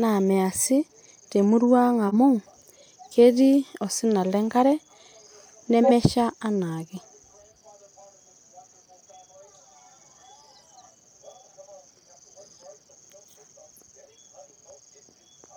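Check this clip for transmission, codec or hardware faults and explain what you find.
Two corrupt frames decoded in this speech clip: at 2.07 to 2.14 s, just after "naa measi temurrua ang", and at 5.83 to 5.91 s, each a single damaged frame decoded anyway. The misread data puts energy at the wrong frequencies, heard as a brief blip, with the second burst much louder.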